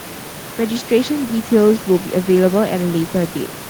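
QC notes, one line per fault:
No system faults detected.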